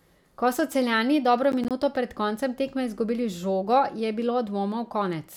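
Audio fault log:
1.52–1.82 s, processor overload crackle: the processor fell behind and missed a handful of buffer deadlines, each leaving a silent gap of roughly 10 ms with hard edges, so the speech tears into gritty crackle that clears just before "pred koncem tekme izgubili".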